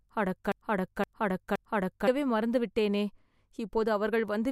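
A broken-record loop is already running as the audio opens and lasts until 2.07 s, just before "மறந்து விட்டேனே". It is likely a stalled player resending one 0.52 s fragment three times, so the waveform shows identical repeating blocks.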